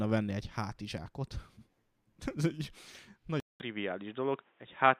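Speech that goes silent for 200 ms at 3.4 s, then turns dull and boxy with nothing above 3.8 kHz, likely because the input switched to a poorer device.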